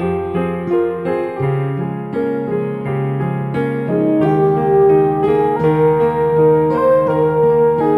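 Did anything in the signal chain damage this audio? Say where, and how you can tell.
Yes. The damage happened at a sample-rate conversion stage and persists for the whole clip: imaging from linear upsampling. The music's top end is dulled, and a faint metallic shimmer sits above it, with mirrored content between 6 kHz and 12 kHz roughly 45 dB below the signal. That fits a 12 kHz source raised to 44.1 kHz by straight-line interpolation, whose weak filtering both rolls off the real highs and leaves spectral copies in place.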